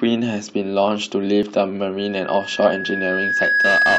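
At 1.43 s, two stream segments arrive with overlapping time stamps, and the player trims the overlap as if it were duplicated audio when it was not. A few milliseconds of the speech are discarded, so the waveform jumps straight from one point to a later one. That overlap between stream segments is heard as a single brief click or tiny skip.

From 1.98 s to the end, a microphone is picking up the loudspeaker it feeds, and at 1.7 kHz the loop gain rises above one. That frequency reinforces itself on every pass through the loop and keeps growing over roughly a second and a half. This loudspeaker feedback squeal is heard as a thin, steady tone that swells into a piercing whistle, ending up about 5 dB louder than the speech.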